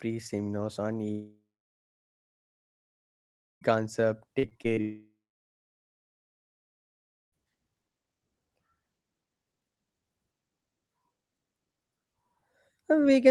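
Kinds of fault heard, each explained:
Long network dropout: Right after "seminars on", at 1.11 s, the sound breaks off. A short buzzing continuation of the last sound fades out. Then about 2.2 s of near silence follows, until 3.63 s. Roughly 2.5 s of audio never plays, and the sound resumes past that point. The same happens again from 4.81 to 7.34 s, with about 2.5 s lost. The likely cause is a long stretch where no packets arrived.
Repeated packet loss (robotic sound): Between 4.39 and 4.79 s, the sound turns choppy. Four short holes open in quick succession. The longest lasts about 36 ms. Each hole is patched by stretching the sound just before it, so about a quarter of that span is filler rather than real audio. Packets kept going missing or arriving late, and the patches stack into a brief choppy stutter just before the second dropout.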